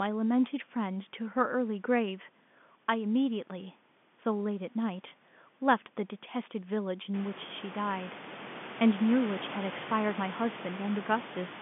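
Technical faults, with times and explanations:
No technical faults detected.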